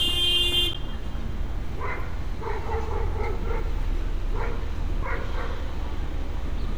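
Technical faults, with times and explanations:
0.73–0.76 s, damaged data in a compressed stream: a brief glitch lasting about 24 ms. Corrupted bytes in the compressed data made the decoder misread the frames there and lose sync until it found the next valid frame header, producing this brief glitch.
5.03 s, audio missing between chunks: a sudden skip where roughly a fifth of a second of sound vanishes and the two sides butt together with no silence. The likely cause is a recorder working in 3-second chunks that dropped a short piece while switching to the next chunk.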